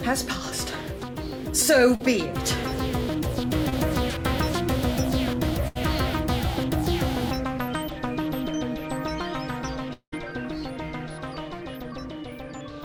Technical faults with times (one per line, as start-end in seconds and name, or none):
1.95-2.02 short concealed packet loss
3.69-3.74 short concealed packet loss
5.68-5.77 burst of packet loss
9.93-10.14 long network dropout